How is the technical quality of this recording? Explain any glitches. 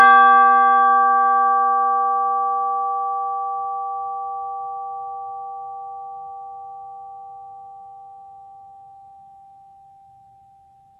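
The music is noticeably degraded throughout. The treble sounds synthetic and gritty, with cymbal-like and sibilant content turning metallic, and nothing at all above 7.4 kHz. That points to likely HE-AAC compression at a very low bitrate, around 16 kbps. The codec spends its bits on the lower spectrum and invents the upper bands by copying lower ones upward under a coarse envelope, so the rebuilt harmonics no longer match across the join.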